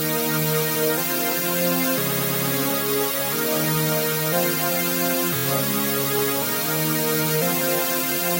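Repeated frames at 2.11 to 2.45 s and 5.36 to 5.45 s: a run of compressed frames was played again. First a 116 ms block, which fits about five frames, sounds three extra times, adding about 0.35 s. Then a single 23 ms frame sounds four extra times, adding 93 ms, heard as a fast stutter.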